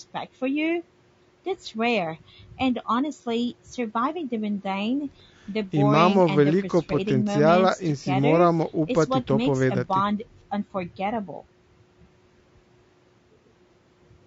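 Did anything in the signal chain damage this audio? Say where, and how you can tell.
Yes, at the codec stage. Throughout the speech there is a rough, grainy texture, with noise filling the gaps between harmonics and a thin, synthetic-sounding top band. This is likely low-delay AAC compression (AAC-ELD): its short frames resolve harmonics poorly, and the damage fits a low bitrate of around 32 kbps.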